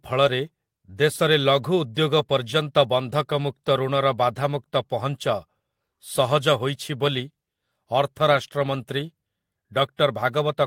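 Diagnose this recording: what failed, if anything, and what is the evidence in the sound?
Nothing failed here as far as I can hear: the speech comes across steadily, with no fault at any stage from the wiring through to playback.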